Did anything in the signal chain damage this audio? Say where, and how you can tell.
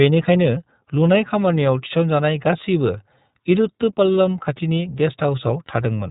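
Yes. The damage happens at the codec stage and runs through the whole speech clip. This is iLBC codec coding. Nothing passes above 3.8 kHz, so the speech sounds narrowband and dull. The coding damage is plainly audible. Speech stays clear but sounds rough and slightly synthetic. iLBC codes each frame's excitation on its own, without drawing on the previous frame. The texture here fits 30 ms frames and the 13.33 kbps mode.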